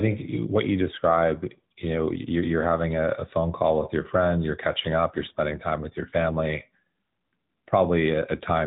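From start to finish the speech carries the AMR narrowband mobile codec sound: nothing above 4 kHz survives, and the voice is rebuilt from a vocal-tract model fed sparse pulses, giving a buzzy, synthetic edge. That synthetic texture, at a rate which fits about 10 kbps, separates it from a plain telephone band-limit.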